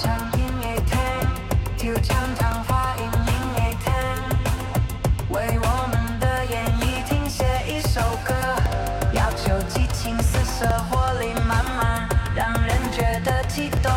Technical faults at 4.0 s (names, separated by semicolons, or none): periodic USB or driver dropouts